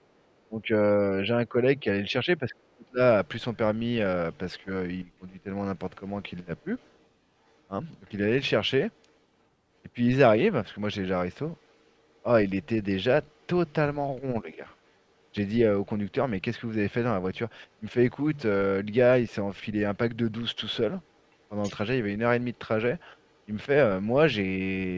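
An echo canceller that likely left residual loudspeaker signal in the microphone produces the other side's voice leaking through: a very faint second voice at 0.02–0.07, 4.33–5.33, 6.57–9.13, 11.57–13.73, 14.86–14.93 and 21.03–23.39 s. When both sides talked at once, the canceller likely turned everything down, giving speech suppressed in double talk. The main speech dips deeply in pieces across 0.18–2.99 s and drops slightly at 14.43–14.67 s.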